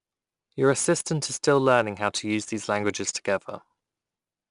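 Throughout the speech, 4-bit ADPCM compression encodes each sample as a coarse step from a predicted value, so the quantising error rises and falls with the level. Loud passages carry a gritty hiss, and nothing sounds above 10.6 kHz, which fits a bitrate near 89 kbps.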